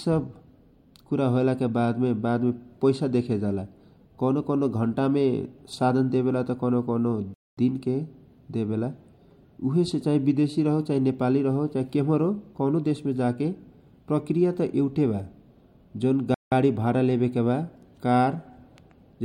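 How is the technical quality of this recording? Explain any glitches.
The speech breaks off twice with brief dropouts, both consistent with a playback stall. At 7.34 to 7.57 s, just after "कौनो कौनो", the sound cuts to silence for 0.23 s. At 16.34 to 16.52 s, a 0.17 s gap comes right before "गारी भारा". The player likely ran short of data or was briefly blocked, so output halted mid-flow and then resumed.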